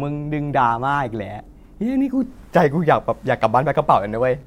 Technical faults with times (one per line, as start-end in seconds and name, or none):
2.58-4.46 computer activity noise